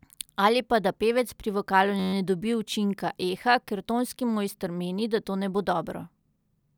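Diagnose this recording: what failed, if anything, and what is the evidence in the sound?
The failure is at the driver or buffer stage: a system hang loop. From about 2.00 to 2.13 s the speech gives way to a steady buzz at roughly 94 Hz. That's one 10.67 ms slice of audio repeating 13 times. The length fits a 512-sample buffer. The host stalled while the audio hardware kept replaying the same ring buffer until things recovered. Playback resumes with essentially nothing lost around the stall.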